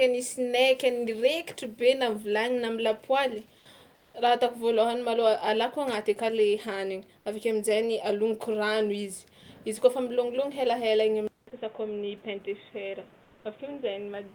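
Just after "na vilany na am'lapoaly", from 3.97 to 4.09 s, there's comfort noise in place of the background. For about 120 ms the real room sound, sitting roughly 42 dB under the speech, gives way to a flat, featureless hiss about 4 dB quieter. That's likely Opus DTX at work: the sender's voice detector decided nobody was talking and stopped sending, so the receiver padded the gap with synthetic noise.

At 11.27 s the input switched to a poorer device, likely a different mic or a headset's call profile. You get about 200 ms of silence at the switch, then the speech carries on to the end at much the same level but boxier and duller, with nothing above 3.8 kHz. A new noise floor also comes in, somewhere around 30 dB below the speech.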